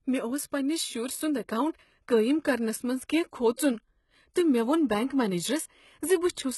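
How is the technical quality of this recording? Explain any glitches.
The recording is limited by one fault that runs through the whole clip. The speech has nothing above about 11.8 kHz, so it sounds dull and lacks air. That hard ceiling, together with the processed character of the speech, likely comes from low-bitrate audio saved at a high bitrate. The sound points to an earlier low-bitrate encode whose losses were kept when the audio was re-saved at a much higher rate. The second encode cannot rebuild the missing detail.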